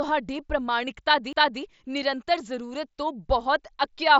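At 1.33 s the CD laser jumped tracks, a CD skip: a tick and very brief mute, then playback resumes elsewhere, landing on "ਨਿਰੰਤਰ ਜ਼ਰੂਰਤ ਤੋਂ".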